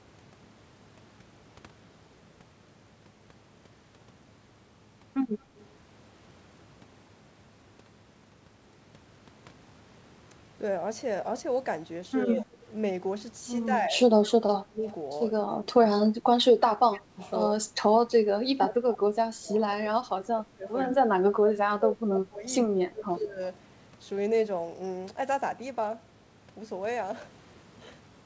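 Speech over a call line, band-limited at 8 kHz in a way that fits a G.722 codec at 64 kbps. Echo leak appears at 5.56–5.66 s, 16.94–17.31 s and 20.7–20.97 s as a delayed copy of the voice, about 35, 25 and 10 dB below the speech. The echo trails by a fixed 102 ms each time, which sets it apart from room reverb, whose tail smears smoothly rather than repeating as a distinct copy. The likely cause is an echo canceller letting loudspeaker pickup through. Speech suppressed in double talk pulls the voice down at 12.26–12.49 s (about 10 dB), 13.66–13.96 s (about 5 dB), 14.62–14.82 s (about 30 dB), 15.49–17.67 s and 18.18–23.4 s (about 25 dB each), across roughly 1.5 s and 4 s of those last spans. The dips vary in depth and come in pieces that overlap the echo bursts, unlike packet-loss dropouts, which leave clean, uniform gaps.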